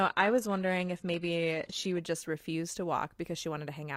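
A speech clip with an adaptive stream starting at a low bitrate. Until 2.0 s the treble is thin, as from a low-rate HE-AAC stream, then quality jumps gaplessly; a spectrogram shows nothing above 12.3 kHz before the switch.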